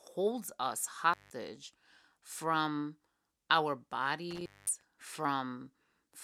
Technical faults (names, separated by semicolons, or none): intermittent contact